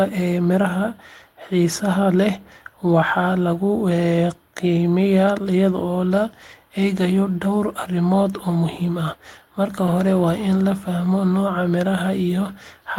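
A speech clip with one lost packet rebuilt from error correction, between 9.87 and 9.89 s. The audio never drops out. Instead, a single 20 ms stretch, about one packet's worth, is played from the low-bitrate redundant copy carried in the following packet, so that moment sounds briefly rougher and noisier than its surroundings. On a spectrogram it shows as a thin vertical strip with smeared, grainier harmonic detail. The waveform stays continuous with no silent gap.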